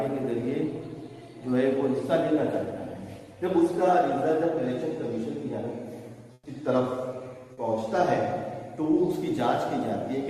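From 6.33 to 6.45 s, about 120 ms of background becomes comfort noise, a steady, featureless hiss about 7 dB quieter, likely from Opus discontinuous transmission. A spectrogram shows a smooth, uniform patch; the waveform drops to an even, flat band.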